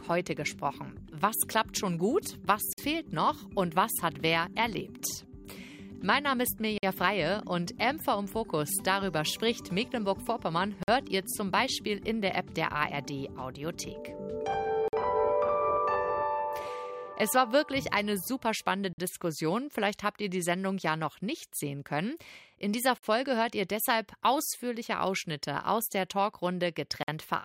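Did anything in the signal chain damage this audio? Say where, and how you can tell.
Yes. Somewhere in storage or playback, the audio was handled in 4-second chunks with a 50 ms silence inserted at each join. That creates a gap between chunks: hard-edged holes in the sound at 2.73, 6.78, 10.83, 14.88, 18.93, 22.98 and 27.03 s. Nothing is lost, but the sound is interrupted.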